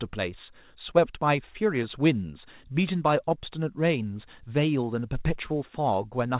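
No technical faults can be heard in the speech. It has gone through a call path whose codec leaves nothing above 4 kHz, which fits narrowband telephone coding such as G.711 A-law.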